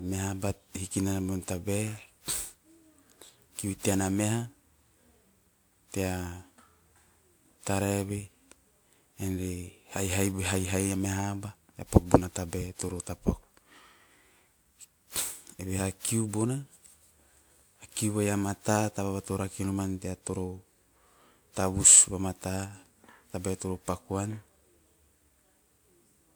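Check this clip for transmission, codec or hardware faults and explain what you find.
The speech carries one fault for its whole length: generation loss. Every word sounds swirly and hollow, with consonant attacks smeared, more degraded than 128 kbit/s would explain. The likely cause is repeated decoding and re-encoding, around seven passes, with a character that points to WMA version 1. Each pass quantises on a shifted frame grid, so noise stacks. A spectrogram shows blurred onsets, with nothing above 20.1 kHz.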